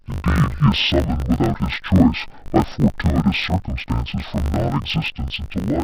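Throughout, interleaved audio read as planar drops the speech an octave with a 50 Hz buzz from 20 ms blocks, yet pace stays unchanged, unlike a sample-rate slowdown.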